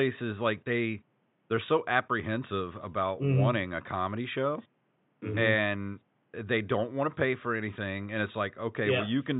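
There are no technical faults to describe in time order; the only background is room noise sitting about 43 dB below the speech.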